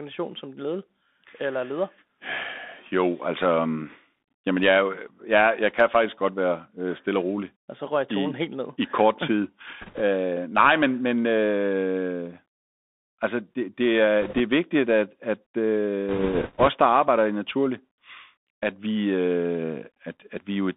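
From the start the speech runs through a Bluetooth CVSD headset codec, with the band held to roughly 200 Hz to 3.6 kHz. A granular hiss lies underneath, and s sounds turn scratchy where the one-bit delta steps can't keep up. This grainy character, rather than a smooth muffling, sets it apart from a plain low-pass filter.

Bit errors on the Bluetooth voice link appear at 9.81 to 10.01 s, 14.22 to 14.40 s and 16.09 to 16.68 s. Each burst adds a rushing, crackly noise over the speech. Because every flipped bit carries equal small weight, there are no sharp clicks or dropouts, unlike packet loss. The last and longest burst, at an error rate nearer 4 percent than 3, sounds roughest.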